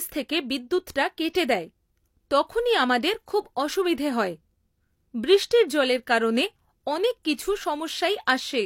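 At 1.33 s there is a brief pre-echo in the speech. A short hiss arrives just before a sharp onset, lasting about 17 ms. This comes from a transform codec. It coded the attack inside a block that began while the sound was still quiet. The quantisation noise, sized for the loud attack, was spread across that whole block. So it leaks into the quiet moment ahead of the onset. The attack itself sounds softened and smeared.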